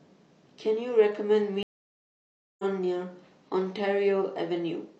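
At 1.63 s there's a stream reconnect: the connection dropped, giving about a second of silence until 2.64 s, then the speech picks up roughly 0.7 s further along.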